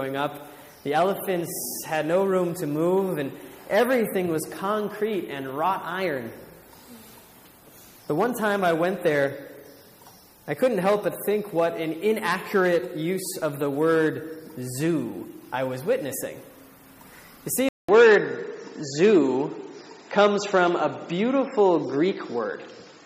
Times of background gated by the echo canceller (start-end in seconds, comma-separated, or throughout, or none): none